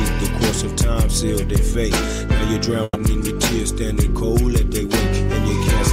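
A burst of packet loss at 2.83–2.98 s dropped about 120 ms of audio; concealment stretches the last sound and fades it down, then 30 ms of silence before playback resumes.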